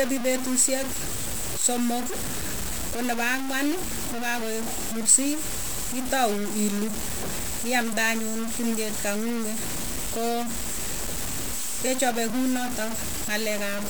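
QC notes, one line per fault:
Throughout: low bit depth without dither. The speech carries a coarse, grainy distortion that rises and falls with the voice instead of sitting underneath it as a steady hiss. Quiet passages and decaying syllables turn gritty and break up, sputtering between a couple of levels or cutting to silence. The error is nearly as loud as the speech itself, which fits roughly 5-bit resolution, likely from samples truncated with no dither to decorrelate the rounding error.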